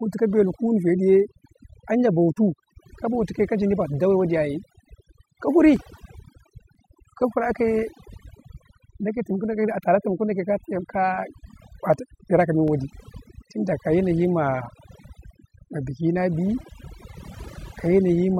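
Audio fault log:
throughout: overdone noise removal. A noise reducer set far too aggressively is pushing individual frequency bands down or out whenever their level sits near its noise estimate, taking the quieter parts of the speech with them. The background falls to near silence dotted with twinkling specks. On a spectrogram, the floor is mostly black with isolated flickering dots, and the speech shows ragged gaps where weaker harmonics and breath were cut away.
5.52–6.75 s: CD scratch ticks. Six ticks arrive at about five per second, the rhythm of a blemish passing the laser once per disc revolution. Each time the error correction cannot rebuild the lost data, the player interpolates or mutes it, lasting up to about 2 ms. A waveform shows brief spikes or tiny flat gaps, and a spectrogram shows thin vertical lines.
11.94–13.42 s: CD scratch ticks. A second run of seven ticks repeats at the same rate of roughly five per second, the longest a few milliseconds. 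They appear as evenly spaced vertical streaks on the spectrogram.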